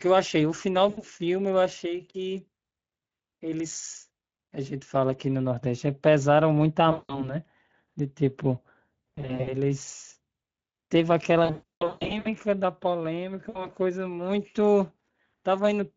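Speech carrying Speex codec damage throughout, a constant hoarse, grainy roughness that fits a mode near 20 kbps. It is steady across the whole clip rather than arriving in bursts, which separates it from the concealment events. VoIP packet loss concealed by the speech codec occurs at 0.89–1.02 s (about 80 ms lost), 6.91–7.35 s (180 ms), 9.15–9.57 s (180 ms scattered over 320 ms), 11.45–12.28 s (580 ms over 800 ms, longest run 160 ms) and 13.49–13.70 s (60 ms). The decoder stretches the last sound into a fading buzzy tone or coloured noise instead of leaving silent gaps, and the weakened voice lingers after packets return.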